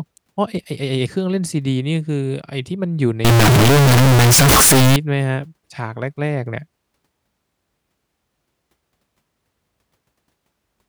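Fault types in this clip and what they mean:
float read as integer: from 3.25 to 4.96 s the speech turns into a harsh, very loud, near-square buzz at an almost fixed, high level, with background noise as loud as the voice, though pitch stays traceable; likely 32-bit float samples read as 32-bit integers.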